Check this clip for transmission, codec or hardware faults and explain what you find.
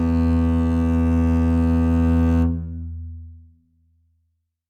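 Listening to the music, nothing stood out as a fault from transmission, encoding or playback hardware.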